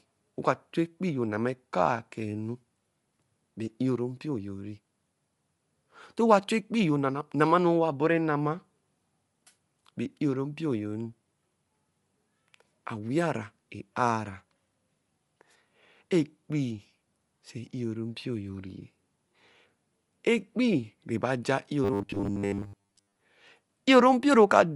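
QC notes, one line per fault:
Throughout: Bluetooth LC3 compression. The speech has a plainly audible grainy, breathy edge. That sounds like a transform codec dropping upper bands and filling them with noise, likely LC3 around 48 kbps with 10 ms frames.
21.84 to 23.21 s: robotic sound from repeated short buffers. The speech turns into a rigid metallic buzz at 100 Hz, which fits a 10 ms chunk being replayed over and over. Most of that stretch is repeats, likely because fresh audio arrived too late.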